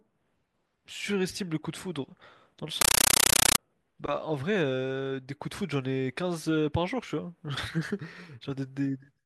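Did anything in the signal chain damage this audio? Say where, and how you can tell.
Yes. Between 2.81 and 3.58 s the speech gives way to loud, chattering static, a classic compressed stream played as audio at the playback link. An AC-3 bitstream on the digital output got treated as plain PCM instead of being decoded. You can hear it as a 31.25 Hz stutter, with roughly 9.3 ms bursts of noise-like data followed by silent padding each frame. That burst length fits a 448 kbps AC-3 stream.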